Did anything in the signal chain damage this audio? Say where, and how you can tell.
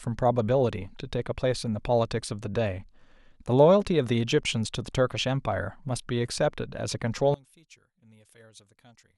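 Yes. From 7.34 s to the end, at about 9.18 s, the speech suddenly drops by about 27 dB and turns faint. The voice's centred body is gone. That collapse points to one channel inverted, and the likely cause is a swapped hot and cold leg in the analogue wiring. When the two channels are summed to mono, the shared centre cancels and only their small difference survives.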